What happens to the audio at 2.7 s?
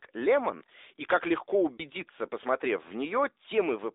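At 2.7 s the speech sounds thin, boxed-in and plainly buzzy, as throughout. This is AMR narrowband mobile codec damage, band-limited to 300 Hz–3.7 kHz, consistent with its 10.2 kbps mode.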